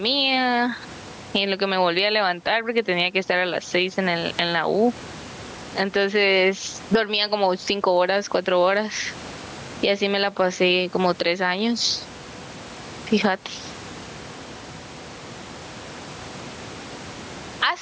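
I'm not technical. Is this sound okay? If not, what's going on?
No. This is gain pumping: the microphone level was likely set far too high, so a limiter keeps yanking it down. Throughout, loud and soft parts end up closer in level, and the sound is squashed.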